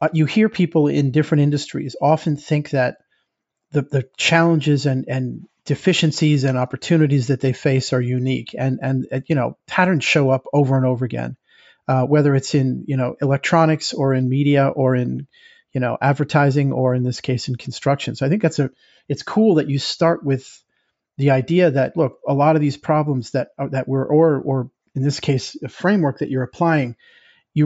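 Nothing in the speech stood out as a technical problem on listening.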